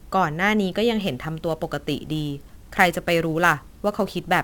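Sample clock jitter sets in at about 1.01 s and runs to the end of the speech at 4.44 s. The converter's clock timing wanders by something like ten microseconds, so each sample lands slightly early or late, and the resulting error is largest where the waveform changes fastest. It comes through as a grainy hiss riding on the speech, sitting roughly 20 dB below it, roughening louder and brighter syllables and dropping away in the pauses.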